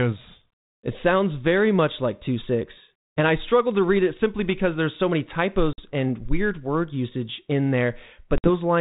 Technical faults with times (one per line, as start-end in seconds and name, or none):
5.73-5.80 packet loss on an ADPCM call
8.38-8.48 packet loss on an ADPCM call